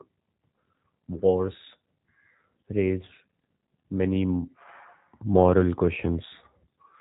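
Throughout, G.729 codec damage: speech stops at 3.8 kHz and sounds rough and synthetic, as with an 8 kbit/s pulse-rebuilt codec, unlike a simple low-pass filter.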